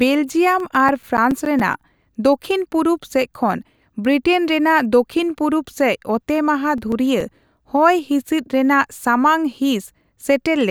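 CD scratch ticks run from 0.60 to 2.16 s and again from 6.36 to 7.49 s, at roughly eight per second. A scratch defeats the disc's error correction once per rotation, and the concealed samples click through the speech, the longest around 10 ms in the first burst.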